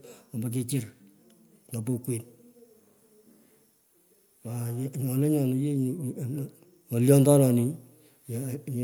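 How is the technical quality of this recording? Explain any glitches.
Nothing stood out as a technical problem on listening to this speech recording, so there are no glitches to explain.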